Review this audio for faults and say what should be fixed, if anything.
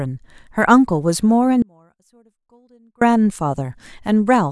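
The speech has an audio dropout to a faint residue from 1.62 s to 3.01 s. For about 1.4 s the signal cuts out abruptly. A faint trace of it remains, roughly 35 dB below normal level. The likely cause is a momentary break in the source feeding a still-live path, such as a loose connector or brief link loss. That path carries only the weak leak. Prevent it by securing cabling and monitoring the input level during recording.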